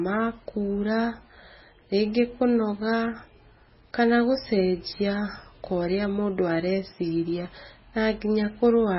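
Throughout, the speech sounds watery and swirly with nothing above 5.6 kHz, likely MP3 compression at a very low bitrate; unlike plain low-pass filtering, weak components flicker frame to frame.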